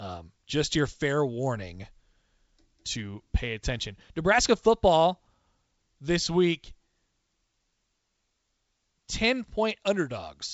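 No faults are audible in the speech; it comes through G.722 wideband telephone coding at 64 kbit/s, with nothing above about 7.7 kHz.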